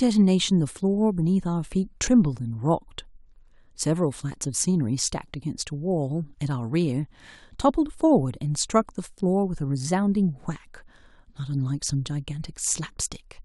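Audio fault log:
No faults heard anywhere in the speech.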